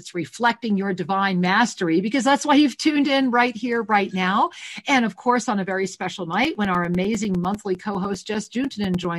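Regular ticks every 0.1 s from 6.45 to 9.05 s are periodic USB or driver dropouts: a blocked audio path silencing a few milliseconds each time.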